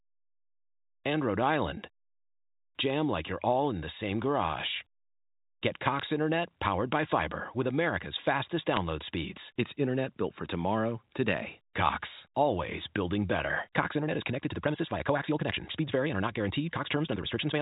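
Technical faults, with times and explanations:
5.99 s and 8.74–8.77 s, bit errors on a digital phone line: flipped bits in the A-law telephone stream each corrupt a single sample, giving sharp ticks, a brief burst first, then a denser crackle at a heavier error rate, while the band-limited speech continues intact, unlike dropouts.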